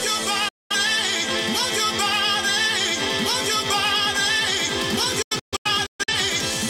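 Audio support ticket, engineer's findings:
Digital broadcast dropout at 0.48 to 0.75 s. Sound fades out in about 8 ms, about 0.21 s lost, then resumes mid-programme. Receiver muting on failed frames. Second dropout from 5.22 to 6.14 s. Several short holes spread over about 0.85 s, about 0.47 s lost in total, longest gap 128 ms. Pattern fits bursts of frames failing checksum. Receiver mutes until good frames return. Lost material not recoverable.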